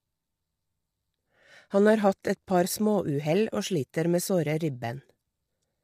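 Throughout, the speech sounds grainy, with noise filling between harmonics. This is likely low-delay AAC compression near 32 kbps.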